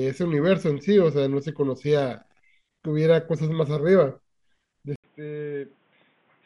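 Input switched to a poorer device, at 4.96 s and lasting to the end of the clip at 6.45 s. After a silence of 80 ms, the speech comes back duller and boxier, with nothing above 3.8 kHz, noticeably quieter by around ten decibels, and over a new, faint background noise well below the speech. This likely comes from the recording moving mid-take onto a narrower-band input, such as a different microphone or a headset's call profile.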